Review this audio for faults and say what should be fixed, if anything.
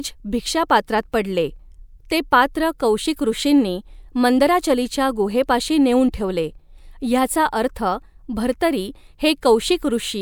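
Nothing needs fixing here.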